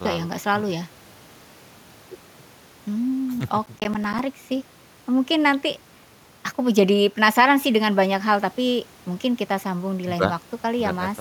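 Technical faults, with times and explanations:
3.66–4.19 s, processor overload crackle: gritty crackle tears through the speech as around ten buffers of about 10 ms miss their deadlines, each leaving a hard-edged silent gap.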